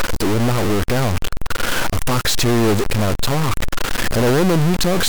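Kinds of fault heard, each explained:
Stuck bit: The whole clip has a harsh, buzzy grit riding on the speech, and the pauses between phrases fill with a steady hiss. That points to one data bit likely stuck at a fixed value. About half the samples then land off by that bit's weight, here a fairly high bit, roughly -15 dBFS. Quiet passages hover around zero, so the bit flips with the signal's sign there, which is why the gaps get so noisy.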